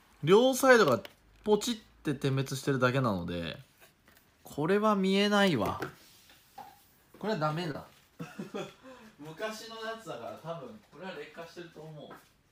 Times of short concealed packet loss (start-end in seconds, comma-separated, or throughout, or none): 7.71-7.75